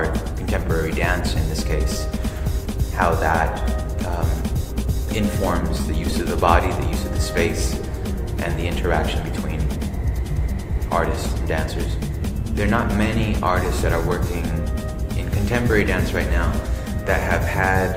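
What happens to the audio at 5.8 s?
At 5.77 s the sound stalls twice in quick succession. These are short stalls from a late packet. A packet misses its slot, the jitter buffer runs dry, and the receiver holds the last sound until the data turns up. The first stall runs to 5.81 s and adds 20 ms. The second follows at once and ends at 5.86 s, adding 30 ms. Nothing is lost. The sound just lingers briefly, with a faint buzz or dip.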